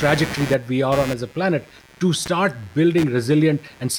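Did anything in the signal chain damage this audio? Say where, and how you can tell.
Yes, in the analogue wiring. Computer activity noise runs through the whole speech clip. It is a buzzing, chirping layer pulsing at around 150 Hz, roughly 15 dB below the speech. Processor or graphics load shifts the shared ground, so the noise tracks the computer, not the talker.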